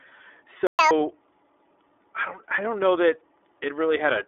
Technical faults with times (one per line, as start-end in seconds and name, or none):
0.00-4.28 iLBC codec
0.67-0.79 playback stall
0.79-0.91 catch-up at higher speed